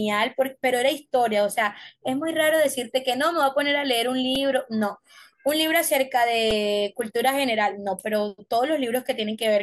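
At 4.35 s and 6.51 s the speech catches on a repeated buffer: a 1.33 ms slice, which fits a 64-sample buffer, plays four extra times and loses a few milliseconds of audio. It sounds like a brief buzzy click. The repeating waveform sets it apart from a silent dropout.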